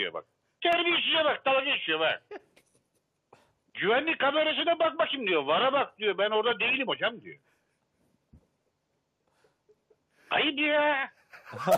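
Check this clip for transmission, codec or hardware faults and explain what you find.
One fault turns up: a single repeated buffer at 0.73 s. New audio didn't arrive in time, so a piece about 1.33 ms long, which fits a 64-sample buffer, played twice, and roughly a millisecond and a half of audio was lost. With so short a piece the result is a brief click rather than an audible stutter. On a waveform the same tiny segment appears back to back with a hard join. A spectrogram shows a thin vertical broadband line at that instant.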